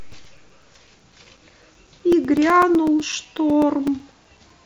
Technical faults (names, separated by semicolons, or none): periodic USB or driver dropouts